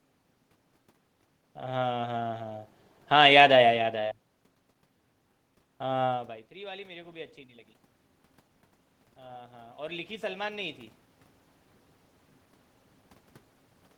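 Speech with room noise underneath. From 9.16 to 10.82 s, automatic gain rising is audible: the input fell by about 22 dB, so the gain control lifted about 4 dB, swelling voice and background together. The level shifts near 6 and 11.5 s come from the talker moving.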